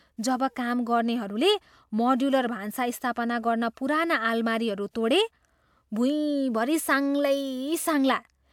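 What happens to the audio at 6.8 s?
Nothing goes wrong at 6.8 s: the speech there runs on intact, with no dropout, click, distortion or other fault.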